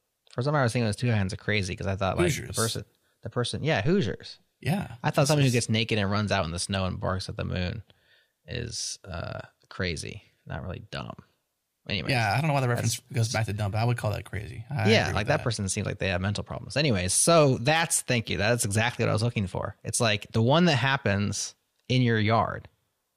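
At 3.85 s, a phantom power thump: a supply switched on or off on the live input kicks the coupling capacitors, giving a deep thump at about -27 dBFS that dies within 100 ms. It shows as one slow waveform swing and a brief low-frequency smear on the spectrogram.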